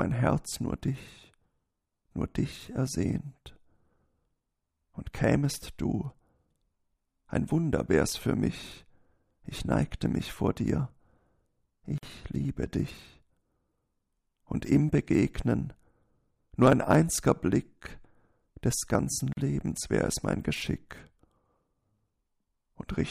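At 11.98 s the sound breaks off for about 49 ms, resuming at 12.03 s, and at 19.33 s a second silence of about 41 ms ends at 19.37 s. Each is a gap at a join of encoded pieces: separately encoded sections were butted together with each run's start-up delay and end padding left in. Unlike a dropout, nothing is lost. The sound picks up exactly where it broke off, and the edges are smeared rather than clicking.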